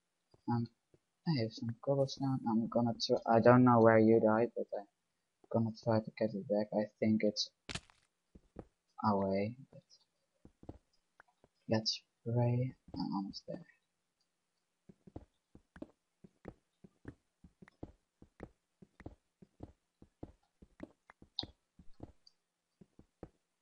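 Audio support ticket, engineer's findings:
No faults found on listening; nothing to report against this ticket.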